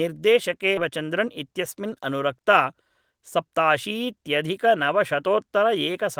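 A speech recording with a skip ahead and two stretches of jitter buffer speed-up. At 0.77 to 0.79 s, playback jumps forward. About 0.7 s of speech is simply gone. Nothing fills the gap, and the two sides butt together almost directly. This happens when the receiver discards a stretch of audio while later packets are already waiting. Dropping it cuts the playout delay by about the same 0.7 s. Speech then runs fast from 0.89 to 2.00 s and again from 2.64 to 4.77 s. The rate is 109 percent, yet the pitch stays put. The talker sounds hurried. The jitter buffer is holding more audio than its target, as when delayed packets arrive in a bunch. To shrink it, the receiver trims short pitch-period slices again and again. That removes roughly a tenth of a second in the first stretch and roughly two tenths in the second.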